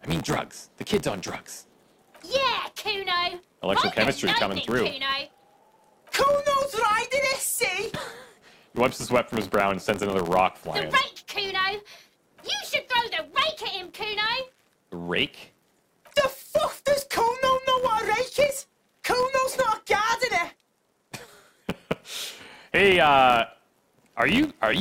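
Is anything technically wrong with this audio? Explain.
Yes. Throughout the audio, a filter is restarted on every block: its internal state is cleared at each block boundary, so every block begins filtering from silence rather than continuing from the last one. Each restart leaves a small transient at the block's start, and together these form a steady buzz at about 86.1 Hz. That rate fits a 512-sample buffer. The buzz rises and falls with the sound's level, growing stronger in louder passages.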